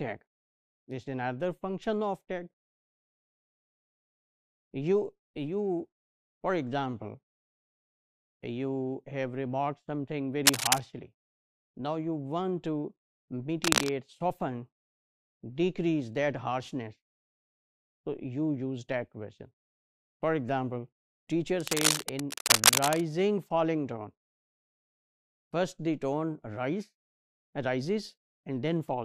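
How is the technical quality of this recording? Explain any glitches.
Three bursts of cable scratch noise break in, at 10.45 to 10.79 s, 13.64 to 13.90 s and 21.60 to 23.03 s. Each is dense, ragged crackle, somewhat louder than the sound itself. A worn connector or cable being moved is the likely cause. Its contact resistance flickers, adding noise.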